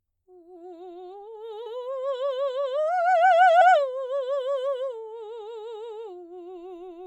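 A music clip with two brief glitches at 1.65 s and 3.6 s, caused by damaged data in a compressed stream that makes the decoder misread frames and lose sync.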